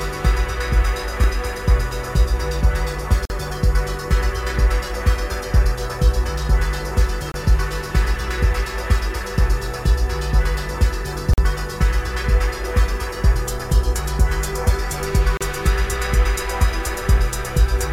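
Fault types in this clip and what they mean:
Gap between stream segments: at 3.25, 7.32, 11.34 and 15.37 s, the sound stops dead for 47, 24, 44 and 34 ms respectively, with abrupt edges on both sides, recurring roughly every 4 s. The segments' timestamps don't line up end to end, so the player inserts silence to fill each small hole. That spacing fits 4-second segments. Nothing is removed; the clip simply gains those short pauses at each segment boundary.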